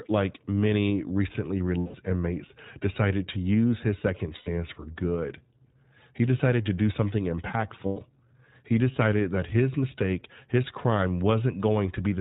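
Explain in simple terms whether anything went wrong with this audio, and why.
Two things went wrong, both tied to the iLBC codec, a phone-quality voice compressor used for internet calls.

The first affects the whole recording. The iLBC codec slices the speech into 20 ms chunks and rebuilds each one separately. It also throws away everything above 4 kHz. That is why the speech sounds muffled and thin, like an old phone line, with a slightly rough, synthetic edge that is plainly audible throughout.

The second is lost iLBC frames. Three short stretches of data never arrived, and the decoder filled each gap by repeating the last bit of voice with some noise mixed in. You hear a brief held, buzzy or breathy vowel instead of real speech. The first gap lasts about 0.16 s from 1.78 s, between "like many recently" and "inmates decided to use". The second lasts about 0.1 s from 4.36 s, between "to use his second" and "for good". 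The third lasts about 0.12 s from 7.86 s. Because every chunk stands alone, the speech recovers cleanly right after each gap.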